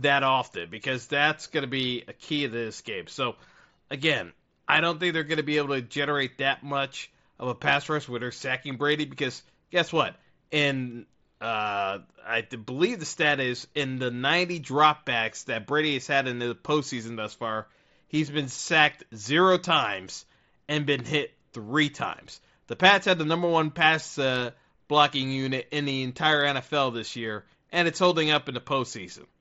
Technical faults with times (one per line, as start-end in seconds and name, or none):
none